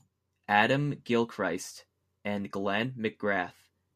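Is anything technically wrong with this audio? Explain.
No, no technical faults here.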